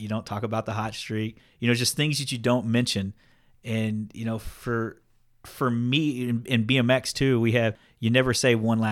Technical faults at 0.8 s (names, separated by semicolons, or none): none